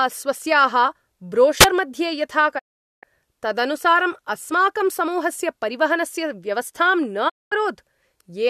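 At 1.60 to 1.65 s a wireless microphone squelch dropout occurs: the FM signal fades, hiss rises briefly, and the receiver's squelch mutes the speech for an instant. Digital broadcast dropouts follow at 2.57 to 3.05 s and 7.28 to 7.53 s, where failed frames mute the output with a 20 ms fade. The gaps last 432 ms and 216 ms, which fits 18 and 9 lost frames of 24 ms.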